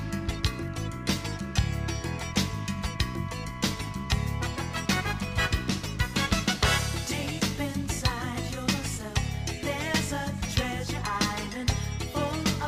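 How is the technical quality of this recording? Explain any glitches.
No glitches or faults heard.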